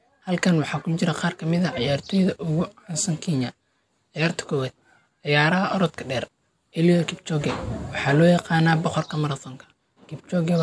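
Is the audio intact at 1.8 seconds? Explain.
Yes, the speech at 1.8 seconds is intact, with no dropout, click, distortion or other fault at that point.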